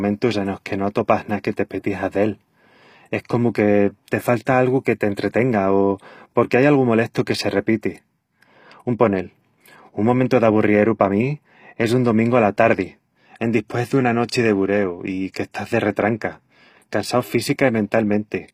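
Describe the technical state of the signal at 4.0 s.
At 4.0 s the speech sounds gritty and metallic in the treble. S sounds come across lispy and synthetic rather than crisp, and nothing is present above 15.5 kHz. The damage is plainly audible and runs through the whole clip. The cause is likely HE-AAC compression at a low bitrate, which fits roughly 24 kbps. The codec encodes only the lower spectrum and rebuilds the top by copying lower bands upward under a coarse envelope, so the upper harmonics no longer line up.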